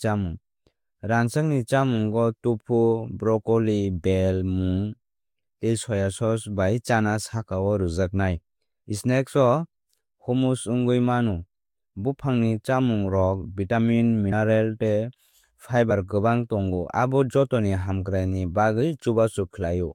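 A small jump forward in the speech occurs at 14.31 s, then again at 15.90 s just before "kwbang tongo abo jotoni". These are compressed frames skipped: whole frames were lost or rejected, dropping roughly 70 ms and then about 40 ms of audio.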